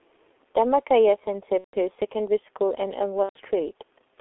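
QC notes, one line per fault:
Throughout: G.723.1 codec. The speech is squeezed into a telephone band of roughly 300 Hz to 3.5 kHz at 6.3 kbit/s, with heavy coding damage. It sounds muffled and hoarse, and the consonants are smeared. A spectrogram shows nothing above 3.5 kHz, and the formants look coarse and blocky in 30 ms steps.
1.58–1.76 s and 3.23–3.39 s: VoIP packet loss concealed by the speech codec. About 150 ms and 120 ms of frames go missing, and the decoder extrapolates its last pitch and filter. This turns the speech into a fading buzzy tone or coloured noise, which is muted from the third lost frame in a row. On the waveform, the envelope decays and then drops to silence. On the spectrogram, a stretched, unchanging pattern replaces the normal formant movement, and the speech stays weak or distorted briefly afterwards.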